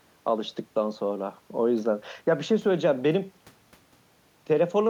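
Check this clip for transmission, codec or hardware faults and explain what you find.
No transmission, codec or hardware faults are audible here.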